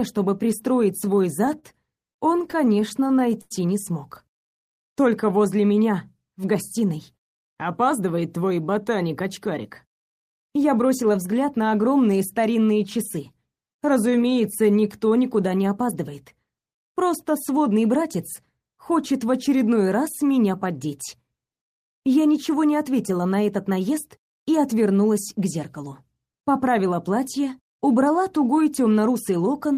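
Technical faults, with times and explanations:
1.05–3.52 s, repeated stalls (stutter): Sixteen times the jitter buffer ran dry because packets came in late, and the receiver stretched the last sound to fill each wait, about a quarter of a second in total and up to 90 ms at once. Nothing is lost, but the sound drags and stammers.
6.82–8.85 s and 16.77–18.04 s, jitter buffer speed-up: The buffer held more audio than it needed, so the receiver repeatedly cut out pitch-period-sized slices, roughly 150 ms and then about 70 ms. The sound runs 5–6% fast at unchanged pitch and feels rushed.
13.64–14.81 s, jitter buffer slow-down: With the buffer running low, the receiver rebuilt its reserve by repeating single pitch periods and bits of pause, adding 93 ms. The sound runs at 92% speed with its pitch intact, so it comes out drawn-out.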